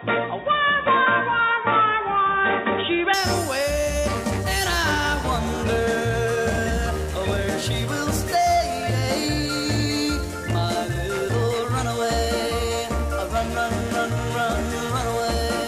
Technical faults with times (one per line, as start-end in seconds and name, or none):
0.00-3.14 input switched to a poorer device